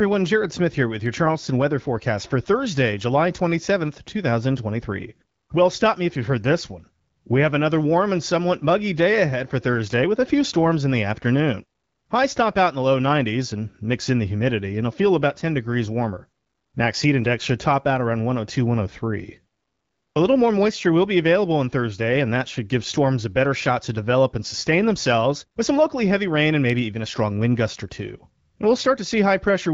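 No technical faults are present in the speech, which comes across as clear over what sounds like an AMR wideband (HD Voice) link at a rate consistent with 12.65 kbit/s, with only the light coding character that setting leaves.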